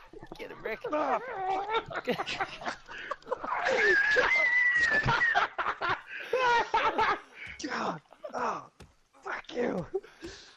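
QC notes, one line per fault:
3.41–6.07 s, call bitrate drop: the audio turns coarse and muffled, with a rough, watery texture and the top end cut off, as the encoder falls back to a very low bitrate after the call's bandwidth estimate collapses. Audio bandwidth narrows from about 20 kHz to 8 kHz, and the coarseness fits a rate of roughly 11 kbps, down from around 128 kbps. The degraded stretch lasts about 2.6 s before full bandwidth returns.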